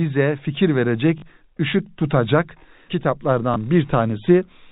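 At 1.18 s the speech stutters for 40 ms, and at 3.54 s there is a 20 ms blip. This is packet loss with the last packet repeated. The receiver replays old audio, which fits lost 20 ms packets, so the first gap sounds briefly robotic and the second is a small blip over the band-limited G.711 telephone coding.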